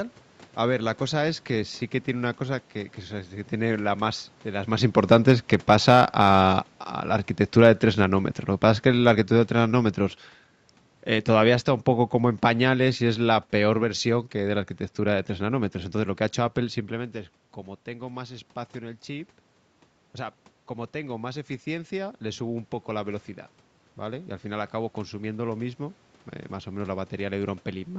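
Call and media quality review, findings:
Automatic gain falling, 5.0 to 9.96 s. Level drops about 7 dB, and the room noise sinks with it. Probable component: the call's AGC, pulling gain down.

Automatic gain falling again, 11.26 to 15.66 s. A smaller slide of about 4 dB, with the background dropping in step. Same AGC mechanism. The gain eases down gradually instead of stepping.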